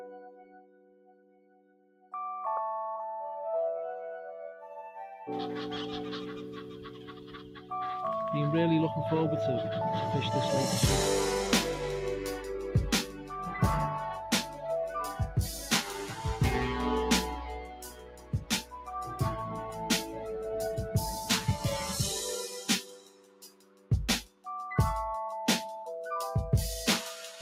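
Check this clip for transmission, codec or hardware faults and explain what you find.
The faults come from processing, not transmission or hardware. A noise suppressor built for speech was left running on this audio.

Throughout, the noise suppressor is working on non-speech sound. It treats steady, sustained content as noise and pulls it down, while sharp onsets pass. The gain rides up and down by about 15 dB. Held sounds sag, tails shorten, and the level pumps and flutters instead of sitting still. The result sounds thin and unsteady.

At eight points the suppressor cuts sound harder than the rest. These are 0.00 to 2.13 s, 7.46 to 7.71 s, 13.06 to 13.31 s, 14.48 to 14.63 s, 15.56 to 15.72 s, 17.43 to 21.94 s, 22.43 to 23.91 s and 24.24 to 24.47 s. The deepest drops, about 16 dB, hit the opening two seconds and the stretch from 17.43 to 24.47 s. The mid-clip dips are milder, about 4 to 8 dB. 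Sustained material sinks or fades early there.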